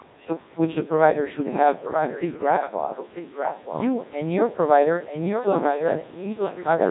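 From start to finish the speech carries heavy Codec 2 vocoder damage, consistent with about 1.6 kbit/s. Only pitch, voicing, energy and spectral envelope survive. The decoder rebuilds everything from sine waves, so delivery sounds robotic and buzzy. The call microphone path's high-pass filter takes out the lowest bass, which is normal.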